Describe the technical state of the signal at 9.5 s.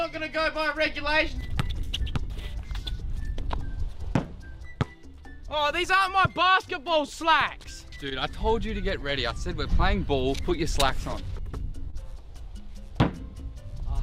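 At 9.5 s the signal sits inside a run of repeated timing corrections that spans 0.42 s to 13.71 s. The receiver keeps repeating short slices of audio to stay in step, so playback runs at 99% speed and gains roughly a fifth of a second over the whole stretch. These inserts are tiny and unevenly spaced, heard as faint hiccups or a slightly unsteady tempo rather than as clicks. Unlike packet-loss concealment, where repeats cluster around gaps, these edits always go the same way and never drop audio.

The cause is clock drift between sender and receiver. The sender's clock runs about 2% slow, so the jitter buffer keeps draining and has to be padded, and it can briefly run dry. This drift sets the direction and steady recurrence of the corrections heard around 9.5 s. Unlike a one-off network stall, it never settles, and its small stretches and stumbles continue across the whole passage instead of forming a single gap.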